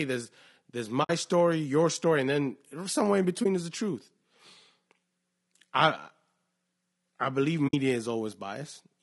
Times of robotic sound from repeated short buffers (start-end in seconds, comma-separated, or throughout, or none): none